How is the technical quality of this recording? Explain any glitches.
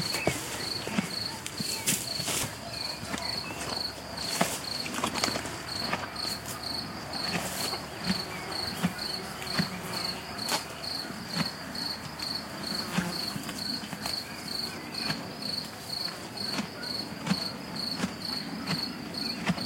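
Technical quality is marred by a regular ticking throughout the clip. From 0.65 s to 19.23 s, a click recurs every 0.6 s, about thirty in all. These are likely clock drift buffer slips: two clocks disagreeing by a few hundred ppm, so a handful of samples gets dropped or repeated at each slip. Their strict regular spacing separates them from random dropouts or packet loss.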